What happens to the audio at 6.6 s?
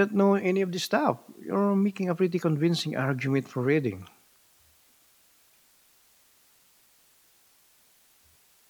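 At 6.6 s the speech carries low bit depth with dither throughout: 9-bit rounding with dither yields steady hiss about 35 dB down, an even spectrogram floor and fuzzy waveform baseline.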